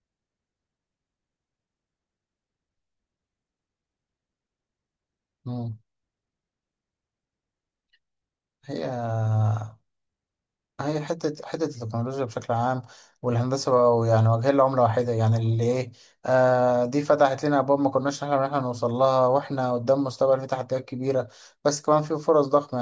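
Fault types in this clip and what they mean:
No faults can be heard anywhere in this recording.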